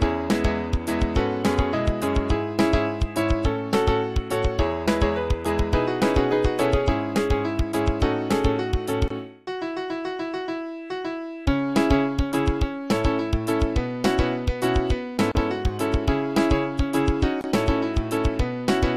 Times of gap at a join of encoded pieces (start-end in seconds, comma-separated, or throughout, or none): 9.08-9.10, 15.32-15.35, 17.41-17.44